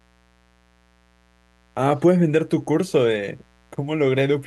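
A mains buzz runs through the whole speech clip. It sits under the talking from start to finish. The rate is 60 Hz, so the mains supply here runs at 60 cycles per second. Sharp switching spikes have leaked into the signal path. They arrive twice in each cycle. Their harmonics stretch up into the kilohertz range. The result is a steady, raspy buzz. It stays well below the speech, roughly 40 dB down.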